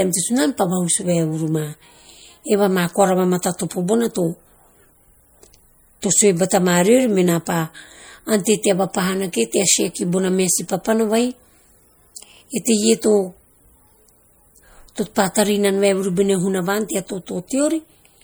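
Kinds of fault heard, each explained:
MP3 compression: Plainly audible coding damage runs through the speech, likely from MP3 near 64 kbps starving weak frequency lines, though treble still reaches 21.1 kHz.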